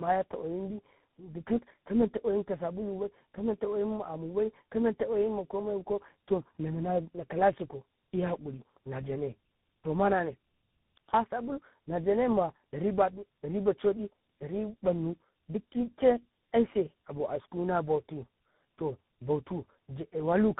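Across the whole clip the speech carries tandem speech coding: three separate speech coders in a row, which fits a chain like AMR-NB, GSM full rate and CVSD, each re-encoding the previous one's damage. Nothing remains above 3.8 kHz, and the roughness and warble exceed what any single codec leaves.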